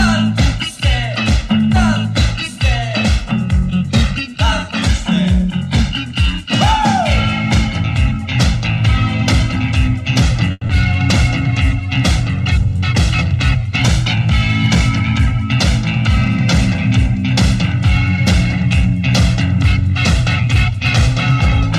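Call audio freeze at 10.51 to 10.63 s: the last sound stretches into a fading buzz or hiss, then brief silence, before resuming intact, likely from delayed packets draining the jitter buffer. Short concealed packet loss at 10.67 to 10.71 s: a quick smear where about 20 ms was filled in and around 60 ms of real audio dropped as playback caught up.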